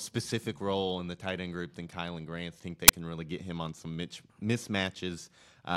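At 2.88 s there is an uninitialised buffer: a block of roughly 10 ms was sent to the output before any audio had been written into it, so stale memory contents were played as samples. The result is a brief, loud crack cutting across the speech.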